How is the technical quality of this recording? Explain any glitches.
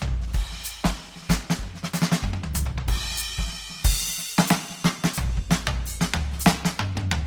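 The technical quality is limited by one fault. Opus compression damage is plainly audible throughout the music. Tones sound grainy, rough and noisy rather than clean. The top end still reaches about 20.3 kHz, so the sound is not muffled. The likely cause is Opus coding in its music (CELT) mode at a very low bitrate, which fits about 16 kbps. At that rate the encoder keeps each band's energy but fills the detail with folded or noisy content.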